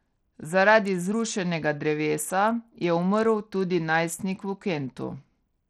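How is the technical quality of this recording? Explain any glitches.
The technical quality is poor: the speech carries plainly audible codec damage from start to finish. It sounds like Bluetooth SBC compression, likely at a low setting, which fits a bitrate near 80 kbps. With so few bits, the upper sub-bands are starved and the rest coarsely quantised, so the treble flickers in and out under a gritty haze. On a spectrogram the top bands appear patchy and blocky rather than smooth; the waveform looks ordinary.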